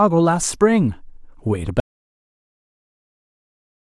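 At 1.8 s the speech cuts to silence, with no room tone, through to the end: an audio dropout to silence, likely from input lost while recording continued.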